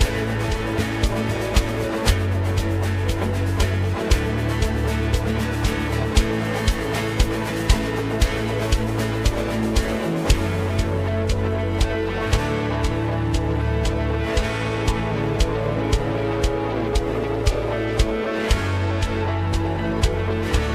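Periodic clock jitter runs through the whole recording. The converter's sampling clock is being modulated at a single rate of around 1 kHz, so each frequency component picks up a pair of sidebands offset by that spacing, with higher-frequency content affected more strongly. The result is a rough, metallic edge laid over the sound, most obvious in bright passages, and it drops away whenever the audio falls silent, since there is nothing left to modulate.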